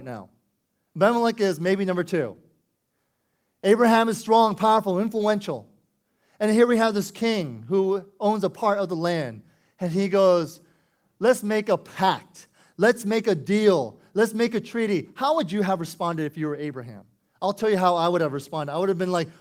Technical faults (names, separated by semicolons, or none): short concealed packet loss